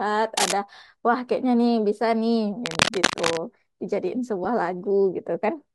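Cable scratch noise appears from 0.37 to 0.52 s and again, much longer, from 2.65 to 3.38 s. Both times dense, uneven bursts of scratching and rustling sit over the speech at roughly the same loudness as the speech itself. This is likely a worn cable, connector or control being moved, so that its contact resistance jumps around rapidly and injects crackling noise into the signal for as long as it is disturbed.

Lost LE Audio frames cause a brief dropout at 4.44 s. About 10 ms of audio is missing, which fits a single lost frame. The decoder fills the gap by repeating the previous spectrum with scrambled phase, so the speech turns into a short noisy smear rather than a clean cut. The loss is too short for any fade toward silence, and it passes as a quick grainy blip. A light, slightly grainy coding texture also runs under the speech, likely from LC3 compression on the Bluetooth link.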